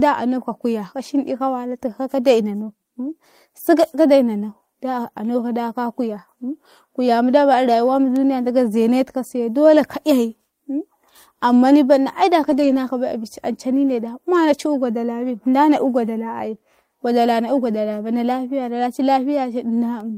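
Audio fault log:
3.05–3.11 s and 12.43–12.73 s, lost packets rebuilt from error correction: packets went missing, and the decoder filled each hole with the low-bitrate backup copy carried in the following packet. The speech never breaks, but about 40 ms at 3.05 s (consistent with two packets) and about 160 ms at 12.43 s (consistent with eight) come out grainier and noisier, with a brief coarse texture before normal quality returns.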